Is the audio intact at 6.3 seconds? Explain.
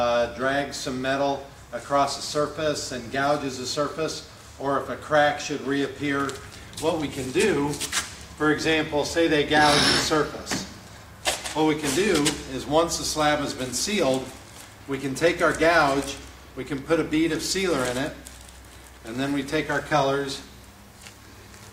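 Yes, at 6.3 seconds the audio plays through intact, with no dropout, click, distortion or other disturbance at that point.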